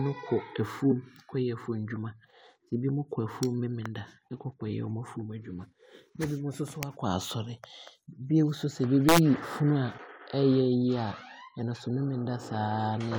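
At 1.94 s a corrupt frame was decoded: one compressed frame arrived with damaged bits and the decoder played it anyway, scattering energy into the wrong frequencies. It comes out as a brief, fairly quiet blip that is unrelated to the speech, unlike a dropout, which would leave a gap.

Integer overflow occurs at 6.83 s and again from 9.09 to 9.18 s. Peaks pushed about 5 dB and then about 2 dB past full scale wrapped to the opposite sign instead of being limited. Each sounds like a violent crack, far harsher than clipping's flattened buzz.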